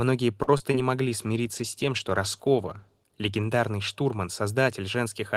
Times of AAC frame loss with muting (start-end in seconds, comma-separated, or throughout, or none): none